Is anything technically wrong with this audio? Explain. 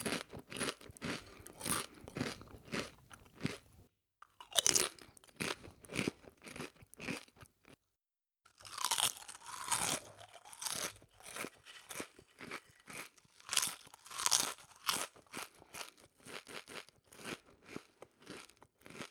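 Yes, there is a CD stuck on one turn from 16.47 to 16.89 s. A fixed point on the disc throws the laser back one track, so the same 0.21 s slice plays twice, each jump marked by a brief mute. On a spectrogram, identical blocks repeat with thin silent gaps between them.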